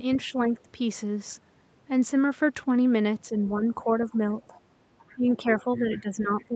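At 0.14 to 0.18 s a faint second voice slips in underneath, about 20 dB below the speech. It returns more quietly at 4.42 to 4.61 s, at around 30 dB down, and then at roughly the same 20 dB level across 4.99 to 5.79 s. A last scrap, about 35 dB down, arrives at 6.40 to 6.44 s. This is the other side's voice leaking through, most likely loudspeaker sound that the echo canceller failed to fully remove from the microphone.

Between 3.54 and 4.22 s the speech dips by up to about 5 dB in brief patches, adding up to about a third of a second. From 5.15 s to the end it sinks further, by up to about 10 dB. This is speech suppressed in double talk, likely because both sides spoke at once and the echo canceller turned the talker down along with the echo.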